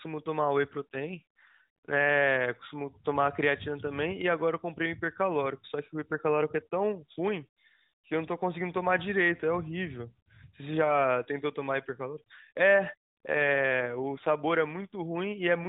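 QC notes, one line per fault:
0.81–2.09 s and 13.30–14.35 s, AMR rate drop: the AMR-NB speech turns rougher and more synthetic with no gap and the same 4 kHz ceiling, which fits the codec stepping down from 12.2 to about 5.9 kbps. On a spectrogram, harmonics smear and upper formants thin while the band edge stays put.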